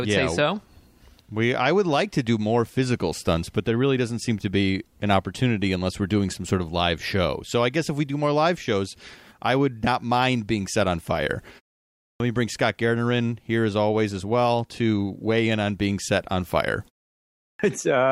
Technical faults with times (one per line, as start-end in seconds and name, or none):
11.90-12.20 clipped start after a pause
17.29-17.59 clipped start after a pause